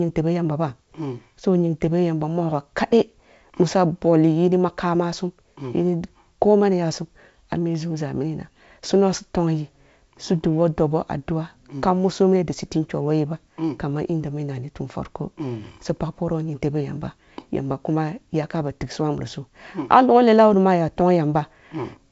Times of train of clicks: none

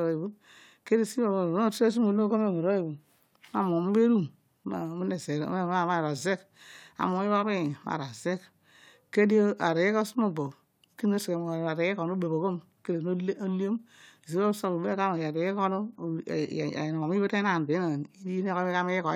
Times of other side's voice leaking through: none

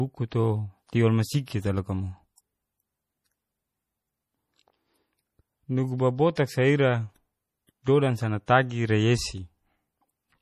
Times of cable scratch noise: none

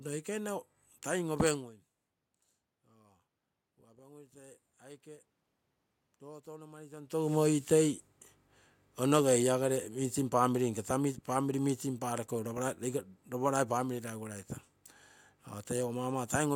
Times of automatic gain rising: 2.69-7.15

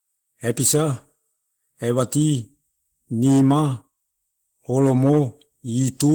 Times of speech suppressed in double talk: none

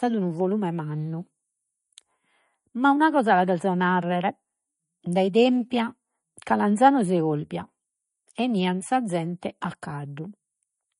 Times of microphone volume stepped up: none

